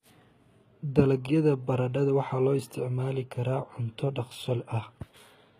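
Throughout the speech, the treble sounds rebuilt rather than recorded, likely from HE-AAC compression at a low bitrate around 20 kbps. Upper bands are copied up from below, so s sounds turn gritty and lispy. A spectrogram shows smeared, repeated-looking texture above a sharp crossover.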